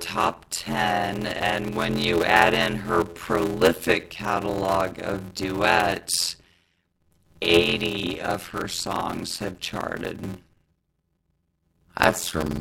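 Speech with a block size mismatch (padded) throughout: a steady 86.1 Hz buzz, consistent with zero-filled 512-sample blocks, and a slowdown to 0.625× speed with no repeated fragments, unlike a block-repeat fault.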